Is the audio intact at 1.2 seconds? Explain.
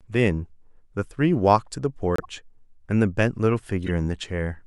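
Yes, the speech at 1.2 seconds plays through intact, with no dropout, click, distortion or other fault at that moment.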